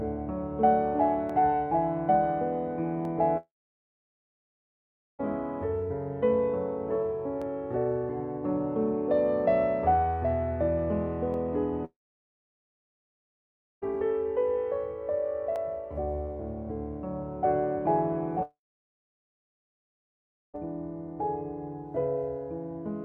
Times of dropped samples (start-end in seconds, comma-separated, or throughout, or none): 1.29, 3.05, 7.42, 11.34, 15.56